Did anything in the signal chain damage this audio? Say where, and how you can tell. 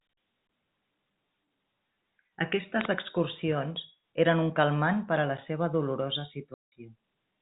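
Yes, at the network stage: packet loss filled with silence. Right after "a la seua dolorosa", the sound drops out from 6.54 to 6.72 s, a 180 ms hole with hard edges, which fits several lost packets replaced by silence. The band-limited G.711 telephone coding underneath sounds fine.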